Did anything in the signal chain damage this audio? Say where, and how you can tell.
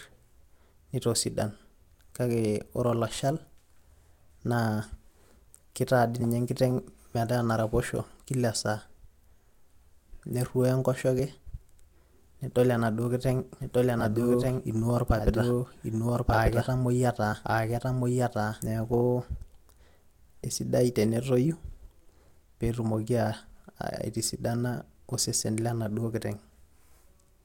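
Yes. Compressed frames skipped at 6.19, 11.19, 13.99, 17.32 to 17.34 and 20.44 s. This is a codec or storage-stage fault. Each time, the speech jumps forward by a few milliseconds up to roughly 50 ms. That points to whole frames missing or rejected by the decoder.

A doubled audio track runs from 13.61 to 18.96 s. A full-band copy at about the same level trails the original by roughly one second. It has no decay or room colouring, and it starts and stops abruptly. The likely cause is a second, slower capture path or an edit that leaves two copies out of step.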